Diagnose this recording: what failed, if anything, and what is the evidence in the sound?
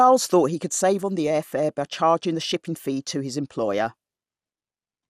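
MP2 compression throughout, at the codec stage: dull, gurgling speech with nothing above 15.2 kHz, likely from a low Layer II bitrate starving sub-bands, leaving coarse quantisation.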